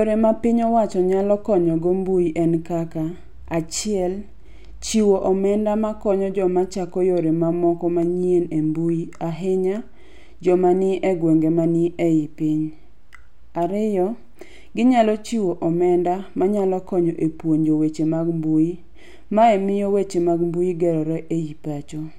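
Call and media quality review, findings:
Dropped samples, single sharp click at 8.03 s in the speech. Likely cause is a brief buffer or capture hiccup skipping a fraction of a millisecond, so the waveform jumps straight to a later value. Nothing audible missing, just the tick.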